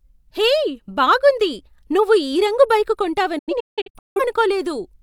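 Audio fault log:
3.38–4.21 s, digital broadcast dropout: just after "నువ్వు ఈ రంగు బైక్" the speech breaks into several short holes, each snapped off with a fade of about 8 ms, silencing about half a second in total across roughly 0.77 s, the longest gap 0.17 s. The receiver muted whenever frames arrived corrupt or failed their checksum, resuming between bad ones, which fits about a dozen lost frames. The speech sent during those holes is gone.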